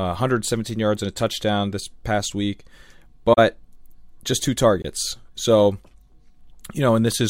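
At 3.33–3.38 s and 4.82–4.84 s, corrupt frame concealment: the decoder muted or smeared damaged AAC frames.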